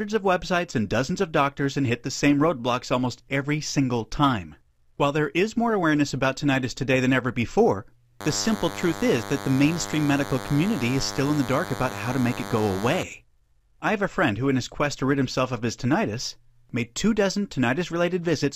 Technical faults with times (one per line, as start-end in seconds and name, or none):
8.20-13.03 DECT cordless phone buzz